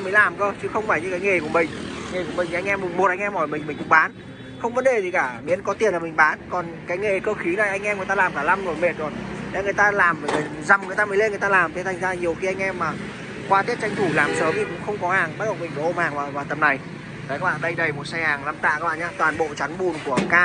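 Nothing here stands out as a technical problem; the audio runs along without any dropouts, glitches or other faults to point to.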